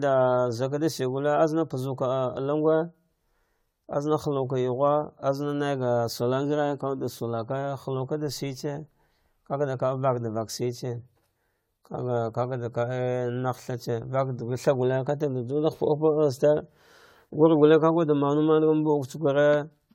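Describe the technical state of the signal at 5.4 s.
At 5.4 s, as throughout, the speech sounds swirly, hollow and smeared, with blurred onsets, likely generation loss from roughly seven successive lossy re-encodes, consistent with AAC-LC around 96 kbit/s.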